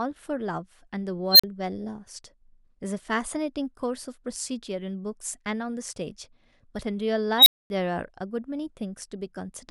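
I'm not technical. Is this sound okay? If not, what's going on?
No. There are two bursts of a fault called an unstable filter. A shrill beep, around 4 kHz, swells in about 80 milliseconds, turns harsh and loud, then cuts to silence. It happens at 1.31 to 1.44 s, with a silence of 40 milliseconds, and at 7.38 to 7.70 s, with 240 milliseconds of silence. The filter that shapes the sound went out of control and fed on itself until it broke down and reset.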